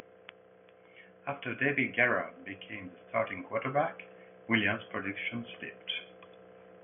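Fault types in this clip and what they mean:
Nothing to flag here: the speech comes through without any technical faults, with only a faint bit of room noise sitting about 45 dB below it.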